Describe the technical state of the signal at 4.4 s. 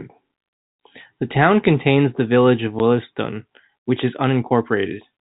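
At 4.4 s the audio is intact, with no fault present; the speech comes through the G.711 telephone coding as expected, with nothing above 4 kHz and only the faint level-following quantisation noise of that format.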